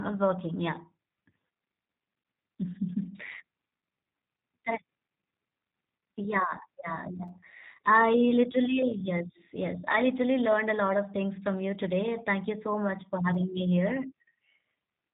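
Throughout, the speech has passed through a G.729 codec, whose dull band-limited character points to an 8 kbit/s low-rate coder. It rebuilds each short frame from a filter and a few pulses, so the damage is plainly audible: nothing above about 3.8 kHz, with a rough, synthetic edge.

At 7.28 s and again at 13.34 s, chunks out of order: a 5.8 ms piece of audio was delivered one chunk late and played after its successor. Nothing is missing, but the swapped segments leave three abrupt joins, heard as a brief jumble.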